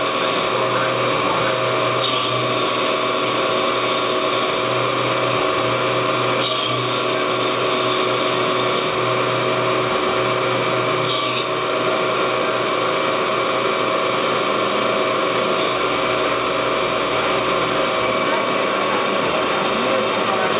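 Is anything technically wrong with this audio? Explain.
No, there are no technical faults.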